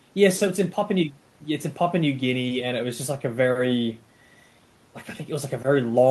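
No technical faults are audible.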